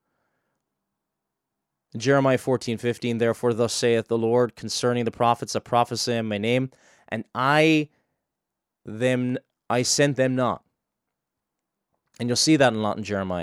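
Nothing in this speech recording stood out as a technical problem on listening.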